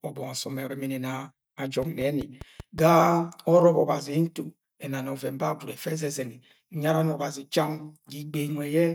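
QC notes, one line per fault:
1.82–2.79 s, train of clicks: a regular ticking of roughly seven near-identical pops at about 5.2 per second, peaking at around the level of the speech itself, so they cut through both the voice and any gaps. On a spectrogram they appear as evenly spaced thin vertical lines spanning the full frequency range. The waveform shows matching narrow spikes. The steady repeating pulse is likely interference from nearby equipment or a faulty connection or power supply.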